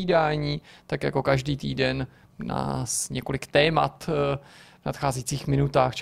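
Overlap-add ripple runs throughout the speech: frames were rejoined with uneven overlap gain, so level dips about 6 dB around 200 times a second, a metallic buzz.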